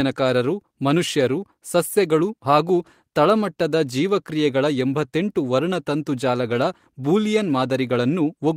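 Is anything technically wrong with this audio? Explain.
No, nothing technically wrong stood out on listening to this speech recording.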